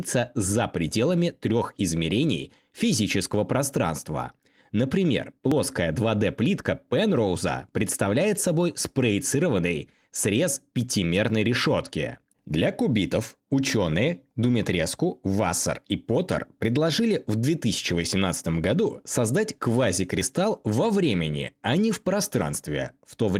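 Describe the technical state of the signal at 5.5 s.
At 5.52 s the speech jumps ahead, roughly 30 ms missing with no gap. That's likely a dropped buffer (overrun), the two sides joined directly.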